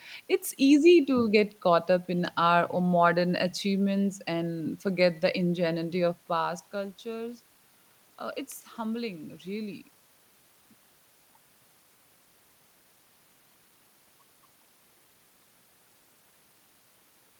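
No technical faults can be heard in this recording.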